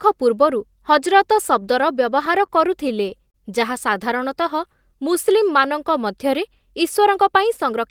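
A short stall from a late packet occurs at 2.46 to 2.50 s and again at 3.30 to 3.36 s. Each time a packet arrived late, the jitter buffer emptied, and the receiver held the last sound for about 21 ms and 38 ms before resuming where it left off.

A jitter buffer slow-down runs from 3.95 to 4.92 s. The receiver repeated single pitch periods to rebuild its reserve, adding 46 ms. The speech plays at 96% speed with unchanged pitch, and sounds are drawn out.

A jitter buffer speed-up follows from 6.99 to 7.81 s. The buffer held too much audio, so the receiver cut short pitch-period pieces, about 40 ms in total. The speech plays at 105% speed with unchanged pitch and sounds hurried.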